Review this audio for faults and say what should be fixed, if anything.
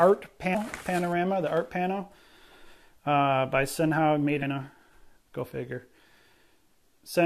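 Damaged data in a compressed stream causes brief glitches at 0.54 s and 4.41 s. At each point, corrupted bytes leave the decoder unable to read a frame, so it loses sync and hunts for the next valid header. Transfer files with checksums and stream over an error-checked transport so corrupted frames are caught and resent rather than decoded.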